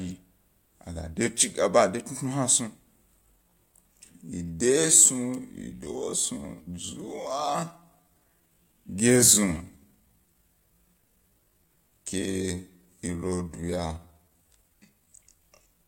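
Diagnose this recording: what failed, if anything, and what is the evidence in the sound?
From 3.18 s to the end, the speech abruptly slows to 0.63 times its pace while pitch stays unchanged, so it drags. This time-stretched section is likely a processing fault, with software lengthening the audio by repeating short pieces.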